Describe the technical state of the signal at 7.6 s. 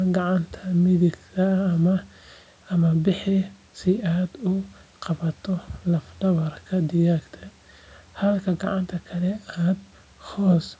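At 7.6 s the speech is intact, carrying only the normal shaping of call microphone processing, with the lowest bass trimmed and nothing above 8 kHz.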